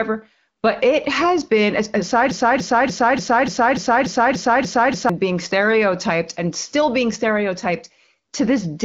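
From 2.31 to 5.09 s the speech gets stuck in a broken-record loop: a 292 ms fragment plays ten times back to back, identical each pass, most likely because the player or stream stalled and kept resending its last chunk. Whatever should have played there is gone, under HD Voice band-limiting that stops near 7.3 kHz.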